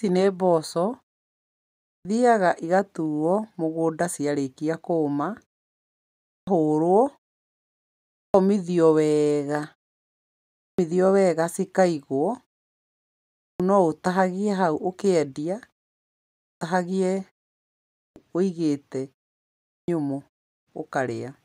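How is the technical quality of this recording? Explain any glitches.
The recording has one recurring fault: a clipped start after a pause, at 1.74, 6.16, 8.05, 10.49, 13.26, 16.31, 17.84 and 19.55 s. Each follows a gap of 0.49 to 0.95 s. The output path drops to a sleep state in that silence and has to wake and relock before audio passes again. Roughly 0.29 to 0.34 s of the onset is lost each time, so the speech resumes abruptly, its first sounds cut off.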